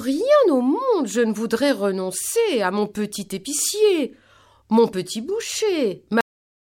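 Cut-off end at 6.21 s: the speech stops abruptly in the middle of a sound, as if the final stretch of audio was never written out or played. There is no natural decay, only an immediate drop into silence that lasts the remaining 0.59 s.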